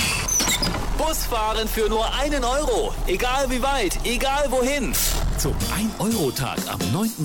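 Nothing here stands out as a technical problem; the audio runs its course without any dropout, glitch or distortion catching the ear.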